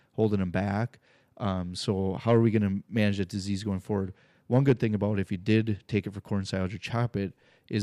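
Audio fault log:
No faults turned up anywhere in this speech recording, so there's nothing to log here.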